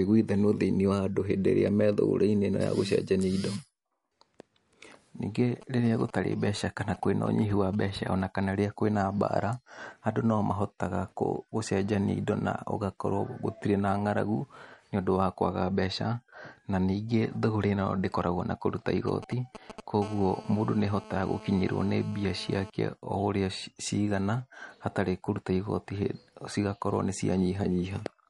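Throughout the speech, the treble stops dead at 11.2 kHz. Sibilants have a watery, swirling texture and consonant onsets are smeared. This is likely MP3 compression at a low bitrate, around 48 kbps by the sound of it. Short of bits, the encoder discards everything above a fixed cut-off and drops weaker spectral lines that then flicker in and out from one frame to the next. The damage is plainly audible.

From 5.62 to 8.22 s, just before "kana wĩ na mbara", GSM signalling bursts break in as a galloping dit-dit-dit of brief buzzes at 217 Hz, roughly 20 dB below the speech. A nearby 2G phone is exchanging short groups of radio bursts with the network, and the audio circuitry rectifies them into audible pulses. The same pattern returns from 19.08 to 19.80 s, right after "ndĩkoragwo na kũruta", this time louder, roughly 10 dB below the speech.

From 20.02 to 22.70 s, the bursts give way to a continuous GSM phone buzz, a hard, raspy 217 Hz tone rich in harmonics at about 19 dB below the speech. 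The phone has moved into a call and now transmits a burst 217 times a second without pause. Rectified the same way, this produces a steady buzz that bears no relation to the speech underneath.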